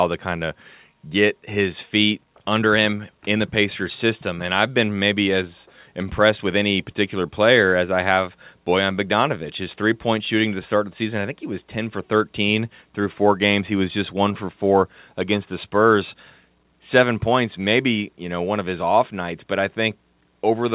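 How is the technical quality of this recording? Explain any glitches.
Nothing stood out as a glitch on listening to this speech recording, which carries the narrowed telephone-style bandwidth of a call path with nothing above 4 kHz.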